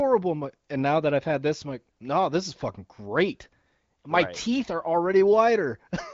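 Nothing stood out on listening to this speech, which comes through the AMR wideband (HD Voice) path at 18.25 kbit/s with its audio ending around 7.6 kHz.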